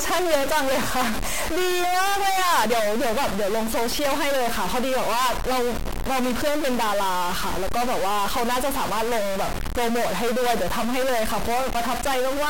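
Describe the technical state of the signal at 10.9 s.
Stuck bit at 10.9 s, as throughout the clip: one bit is held fixed, likely by a faulty converter, shifting samples by about -20 dBFS, heard as harsh buzzy distortion.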